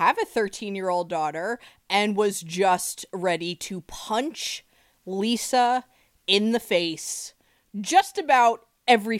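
No technical faults can be heard anywhere in the recording.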